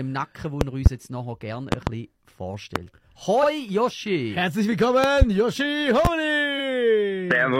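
Right at the start, between 0.61 and 0.89 s, there's a loud pop, actually two hits close together, jumping to roughly 20 dB above the audio while the sound keeps going underneath. The likely cause is a voltage spike from a switch, a plug, static or a driver glitch, which the downstream circuitry shapes into a sharp thump. The same double pop comes back at 1.72 to 1.90 s, and a single one lands at 2.76 to 2.79 s.

At 3.39 to 3.44 s there's a quick stutter from repeated frames: one 42.7 ms chunk of compressed audio gets played a second time, so you hear that slice twice, and the clip runs 42.7 ms longer.

Pops continue with a double at 5.04 to 5.25 s and a single at 6.05 to 6.08 s, each again around 20 dB over the sound.

A second repeated-frames stutter hits at 6.55 to 6.60 s, with another 42.7 ms chunk replayed once and another 42.7 ms added.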